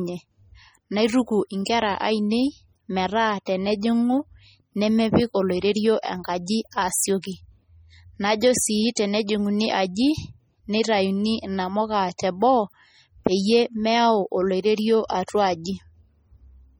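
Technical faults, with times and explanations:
Throughout, MP3 compression: heavy watery swirling as weak frequency lines switch on and off between frames, likely from MP3 encoding at a bitrate near 32 kbps.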